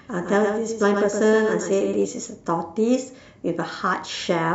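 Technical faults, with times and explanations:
0.0–2.02 s doubled audio track: a dry, flat repeat trails the speech by about a tenth of a second, somewhat quieter, then stops abruptly; likely a slower second capture path.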